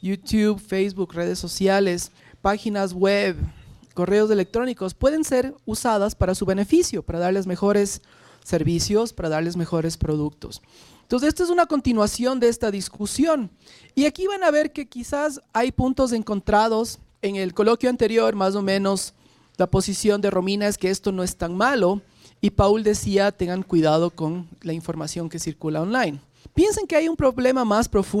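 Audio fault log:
12.43 to 13.01 s, repeated stalls (stutter): four brief gaps, longest 29 ms, where late packets left the buffer empty. The last sound was stretched to bridge each, so it catches and drags.
13.58 to 15.26 s, jitter buffer slow-down: the buffer repeated pitch periods to build up reserve. About 108 ms was added, so the sound runs at 94% speed, same pitch.
17.26 to 17.91 s, jitter buffer speed-up: excess buffered audio was trimmed by cutting short pitch periods, roughly 70 ms in all. The sound hurries at 111% speed, pitch unchanged.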